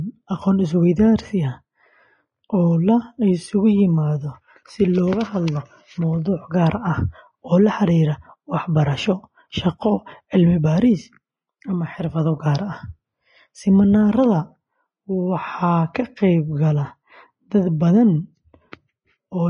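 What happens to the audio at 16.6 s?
At 16.6 s the speech sounds hissy and grainy with blurred attacks and nothing above 10.6 kHz, as it does throughout: likely Vorbis compression at a low bitrate.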